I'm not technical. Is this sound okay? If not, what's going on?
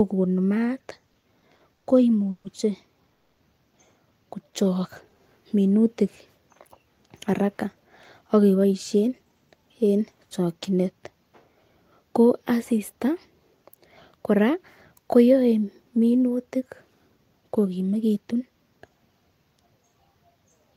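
No. The speech has several short timing faults typical of a call over an unsteady network connection.

Repeated stalls (stutter), 0.99 to 1.86 s: the speech catches seven times in under a second. Data kept arriving late, so the receiving end ran out of sound to play and stretched the last sound to cover each wait, the longest being 90 ms. About 210 ms of filler went in, nearly a quarter of that stretch, but nothing was lost. The speech just drags and hiccups.

Call audio freeze, at 2.30 to 2.46 s and 3.14 to 3.39 s: the speech halts briefly and a held continuation of the last sound fills the pause, 140 ms the first time and 230 ms the second. This is likely caused by data getting held up on the way. When it arrived, the speech resumed where it stopped, so no speech is missing, only delayed.

Jitter buffer slow-down, 4.44 to 5.20 s: the speech runs at about 91% speed while the pitch stays normal, so sounds seem drawn out. 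The receiver was short of stored audio and built up a reserve by repeating tiny slices of the sound, adding 79 ms in total.

Jitter buffer speed-up, 6.99 to 9.89 s, ending just before "en chokinet", and again at 17.71 to 18.41 s: the speech sounds hurried, at about 109% and 111% speed, with the pitch unchanged. Too much audio had piled up, so the receiver trimmed tiny slices to catch up, roughly a third of a second in the first stretch and under a tenth in the second.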